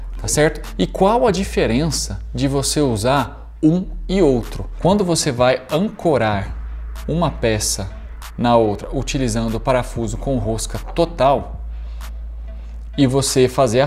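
No technical faults are audible.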